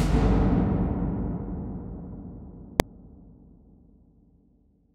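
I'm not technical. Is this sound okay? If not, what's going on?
No. At 2.80 s there's a single sharp bang. That's invalid numbers at full scale: a calculation went haywire and spat out impossible values, which got pinned to an extreme level far beyond the normal sound for a split second, under a millisecond, so you hear one loud click.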